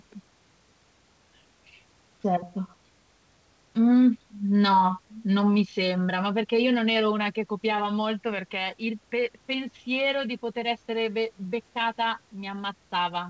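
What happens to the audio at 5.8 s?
Nothing goes wrong at 5.8 s; the audio is intact there.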